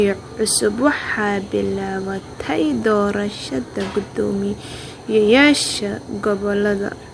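No technical faults can be heard anywhere in the recording, and the signal stays continuous and intact throughout.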